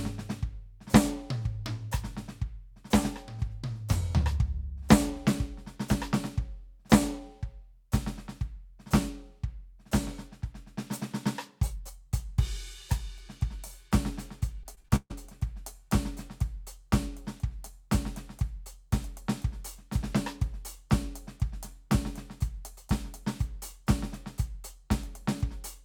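From 14.63 to 15.12 s the stream suffers repeated packet loss, with data dropping out or arriving too late again and again. Each hole, the longest about 140 ms, is patched by stretching the last received sound, and nearly half of that half-second is concealed this way. The music turns choppy as the fills repeat and pieces of it go missing.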